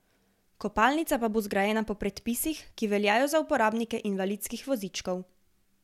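No technical faults can be heard anywhere in the recording.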